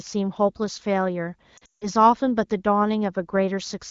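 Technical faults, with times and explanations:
1.57 to 1.87 s, lost AMR speech frames: a burst of frames fails its radio checksum, so the wideband decoder keeps replaying the last good pitch and vocal tract shape at falling gain. Around 200 ms goes missing across a 240 ms stretch, which fits roughly ten 20 ms frames, with the longest gap at 160 ms. You hear the sound drop quickly to near silence, then come back weak and a bit rough, set against the clear 15.85 kbit/s HD Voice around it.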